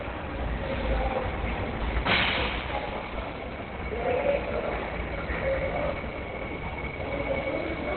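Everyday sounds here, and the whole thing sounds like it's been squeezed hard, likely through Opus compression at a very low rate. Nothing gets through above about 4.3 kHz, so it's narrowband and muffled, with a hoarse edge on everything. That dull, rasping quality fits the encoder dropping into its speech-oriented SILK mode, which is what you'd expect somewhere around 12 kbps. The damage is heavy and runs from start to finish.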